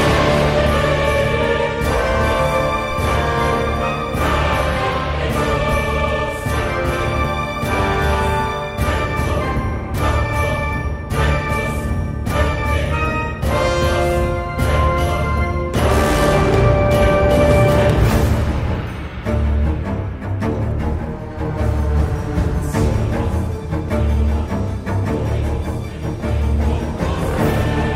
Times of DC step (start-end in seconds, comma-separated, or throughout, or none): 2.91